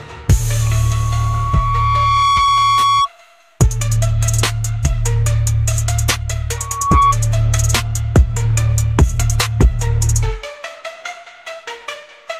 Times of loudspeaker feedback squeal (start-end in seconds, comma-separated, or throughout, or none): 0.61-3.09, 6.57-7.16